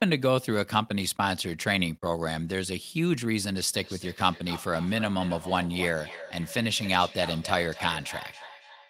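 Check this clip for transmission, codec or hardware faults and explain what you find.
One fault is present. From 3.74 s to the end, a feedback echo between two devices: a second device replays the speech, its microphone recaptures it, and each phrase returns roughly every third of a second, about 14 dB below the original.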